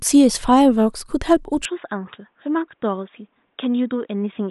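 A speech recording that turns dull and boxy at 1.65 s and stays that way to the end. Nothing passes above 3.8 kHz, the level drops about 5 dB with no gap, and a faint new noise floor appears far below the signal. The likely cause is an input switched to a poorer device. A spectrogram shows the upper band abruptly emptied, and the waveform shrinks in amplitude.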